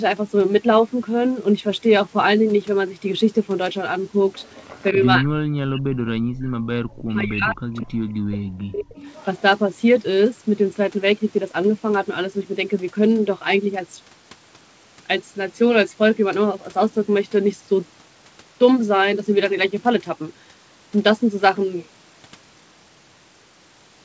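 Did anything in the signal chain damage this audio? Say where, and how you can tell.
Yes. At 4.36–4.84 s, 7.77–7.81 s and 8.98–9.41 s a faint copy of the sound trails the original by about 207 ms, sitting about 25 dB below it. This is likely an echo leak in the call processing: the far end's echo canceller let part of its loudspeaker pickup through. A fixed delay of around 200 ms distinguishes it from room reverberation, which decays smoothly instead of repeating as discrete scraps.

Between 5.19 and 5.99 s, 6.26 and 6.51 s, and 7.09 and 8.97 s, the main sound repeatedly sinks by as much as 40 dB in chopped pieces. In total this covers roughly 0.7 s, 0.3 s and 1.5 s. The pattern is likely speech suppressed in double talk, where the canceller turns the near talker down while the other side is active. Packet loss leaves brief gaps or concealment artefacts rather than deep level dips.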